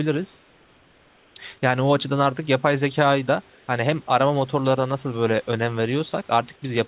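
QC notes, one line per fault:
0.36–1.36 s and 3.50–3.68 s, comfort noise in place of the background: the room background becomes a steady, featureless hiss, about 3 dB and about 1 dB quieter respectively, for 1.0 s and 180 ms. The likely cause is discontinuous transmission halting audio in pauses while the receiver synthesises shaped noise, which fits RFC 3389 comfort noise over the 4 kHz-limited call path.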